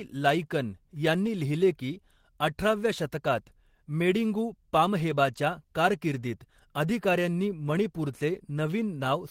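No technical faults can be heard in the speech at any point; the signal stays continuous and stable throughout.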